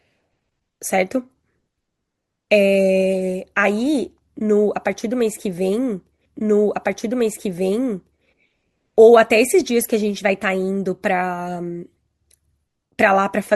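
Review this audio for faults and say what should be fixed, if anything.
Stream segment repeated, 6.25 to 8.25 s: one 2 s segment was queued twice, so the speech jumps back with a blip and replays cleanly, unlike an overlapping echo. Prevent it by checking segment sequence numbers before queuing, so a duplicate is discarded rather than played.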